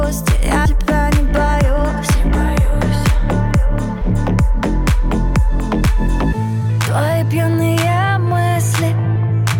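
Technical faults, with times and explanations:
0.65 s, 4.01 to 4.03 s and 9.15 to 9.18 s, compressed frames skipped: the sound jumps ahead by about a tenth of a second twice, then about a fifth, which fits whole 20 ms frames going missing.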